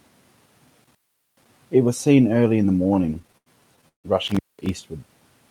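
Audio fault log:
0.84–1.48 s and 4.27–4.69 s, intermittent contact: a loose plug or cable briefly lets go, so the sound drops out for roughly 420 ms and then 200 ms, with crackle at each edge and just faint hiss while the connection is open.
2.83–4.06 s, repeated stalls (stutter): packets kept arriving late, the jitter buffer ran dry about fifteen times, and each gap was covered by stretching the last sound, the longest for 153 ms. Nothing's lost, but roughly a third of that stretch drags and stutters.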